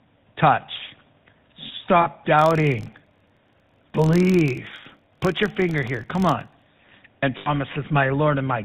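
Throughout, the speech carries the buzzy, gravelly roughness of the GSM full-rate codec, consistent with its 13 kbps coding. The vocal-tract model is driven by a coarsely sampled pulse excitation, and nothing above 4 kHz survives, so the sound is dull and grainy.

At 2.02 s, lost GSM frames leave about 40 ms, which fits two missing frames, where the decoder repeats the last good frame's settings. The result is a brief rough, metallic ring in place of the missing sound.

From 2.39 s to 6.69 s, a filter restarted on every block begins each block from silence, putting a small transient at every block edge. These form a steady 43.1 Hz buzz that rises and falls with the speech level, which fits a 1024-sample block.

At 7.38 s, a second run of lost GSM frames lasts about 80 ms, which points to four frames. The held, ringing tone is longer here.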